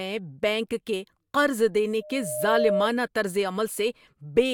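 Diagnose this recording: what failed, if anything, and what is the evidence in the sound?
Analogue-side loudspeaker feedback squeal, 2.01 to 2.89 s: a 610 Hz tone swells in about half a second to roughly 5 dB over the speech. The mic's hearing its speaker.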